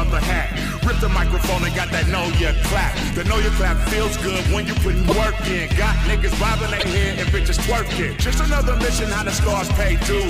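At 5.08 s, repeated frames cause a brief stutter. A 26.1 ms block plays twice, which fits a single compressed frame written out again. At 6.78 s it happens again, this time with a 52.2 ms block, which points to two frames, played twice. The stutter is longer, and the sound audibly jumps back. Together the repeats add 78.3 ms to the audio.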